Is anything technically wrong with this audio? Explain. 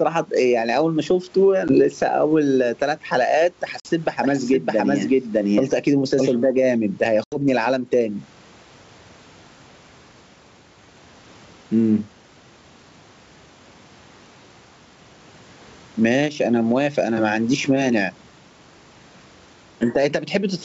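Yes, there are three separate problems here.

Gain pumping runs through the whole speech clip. The level keeps breathing. It gets yanked down whenever the talker gets loud, a swing of roughly 15 dB. Loud and soft passages end up squashed toward the same level. The likely cause is input gain cranked far too high, with a fast limiter or compressor clamping down on every peak.

There's packet loss on what sounds like an ADPCM call at 1.68–1.74 s, 3.80–3.87 s and 7.24–7.37 s. Each one is a hard-edged hole of silence, about 10 ms, 50 ms and 80 ms long, so anywhere from a single packet to several in a row. After each gap the decoder's predictor and step size have drifted from the sender's, so the speech comes back slightly distorted before it settles over the next few tens of milliseconds.

A doubled audio track appears from 4.23 to 6.31 s. A second full-band copy of the speech trails the original by around 700 ms at roughly the same loudness. 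It has no reverb tail or room colour, and it switches on and off abruptly at both ends. That most likely comes from the signal being picked up again through a slower path, or from an edit that left two offset copies stacked.

The faint room noise sits well under the speech, and the wideband telephone coding itself sounds clean.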